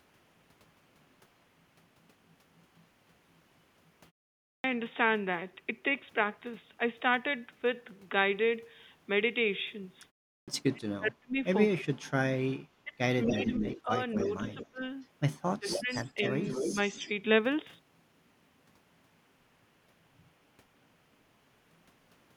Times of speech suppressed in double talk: 10.71-11.88, 12.83-14.82, 15.59-15.91

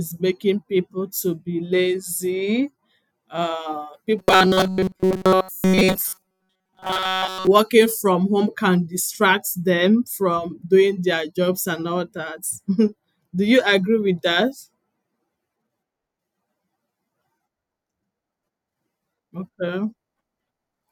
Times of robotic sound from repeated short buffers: 4.18-7.47

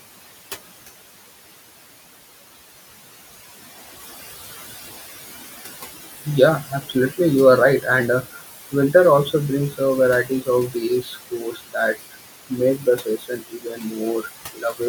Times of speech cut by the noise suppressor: 6.68-7.16, 10.24-10.48, 11.02-11.75, 12.78-13.93, 14.53-14.81

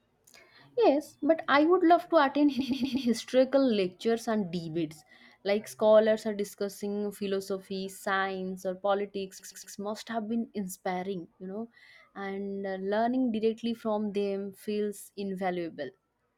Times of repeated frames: 2.59-3.07, 9.39-9.75

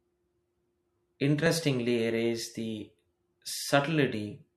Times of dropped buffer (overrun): 1.46

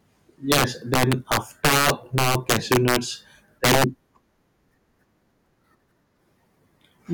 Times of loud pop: none

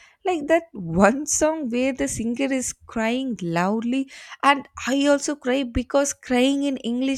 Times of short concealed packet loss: none

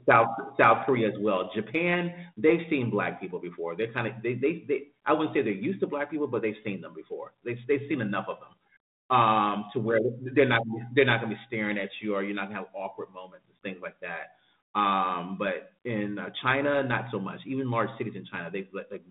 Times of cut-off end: none

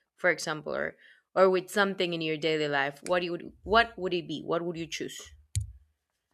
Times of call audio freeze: none

